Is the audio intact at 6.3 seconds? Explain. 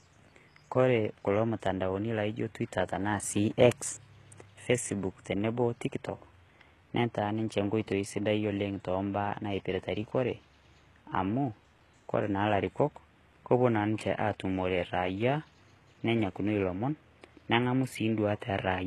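No. At 6.3 seconds the speech carries HE-AAC compression damage, as it does through the whole clip. The damage is heavy. Nothing sounds above about 12.3 kHz. The treble that remains is likely rebuilt by spectral band replication. Lower bands are copied upward and shaped to a rough envelope. Their harmonics do not line up with the real ones. So s sounds come out gritty, metallic or lispy. This fits a very low bitrate, near 16 kbps.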